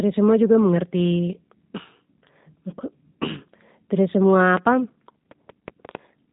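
G.729 codec damage runs throughout the speech, which fits an 8 kbit/s G.729 stream: each short frame is rebuilt from a vocal tract filter, a pitch predictor and a few pulses, so nothing passes above 3.8 kHz and the voice sounds rough and synthetic.

A train of clicks starts at 4.57 s, just after "tida semua", and continues to 5.96 s. About seven similar pulses arrive at an uneven pace of around 4.4 per second, peaking about 15 dB above the speech, most likely from electrical interference or a struggling interface.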